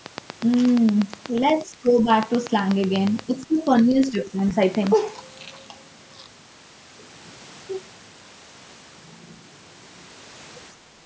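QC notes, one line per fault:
0.06–4.88 s, train of clicks: a regular pulse, likely interference from nearby equipment or a faulty connection or power supply, injects clicks at 8.3 per second. That gives roughly forty near-identical ticks, peaking about 10 dB above the speech and heard through pauses as well.
1.61–2.08 s, 3.26–3.67 s and 3.83–4.54 s, speech suppressed in double talk: with both sides talking at once, the echo canceller likely could not tell the near talker from loudspeaker echo and turned everything down. The speech dips by about 15 dB, about 15 dB and about 10 dB respectively.
10.8–10.95 s, background gated by the echo canceller: while the loudspeaker played, the canceller clamped the microphone hard for about 150 ms. The room sound drops by about 7 dB, then returns as the canceller releases.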